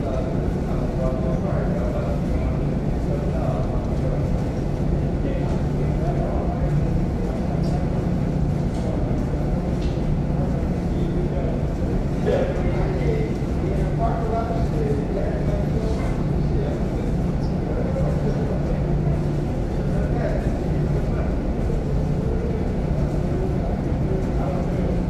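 No technical faults can be heard anywhere in this recording of sounds. Nothing in it points to trouble in how the audio was captured, processed or played back.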